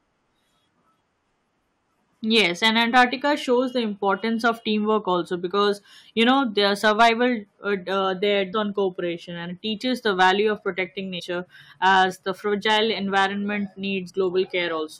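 At 8.52 s, right after "uh there" and before "on cooperation and it", a brief blip cuts into the speech: damaged data in a compressed stream. Corrupted bytes in the encoded stream make the decoder misread the frame, lose sync and hunt for the next valid header. The same fault recurs from 11.17 to 11.21 s, between "the value of protecting" and "as the fragile", as a slightly longer squawk, and again as a short blip at 14.09 s.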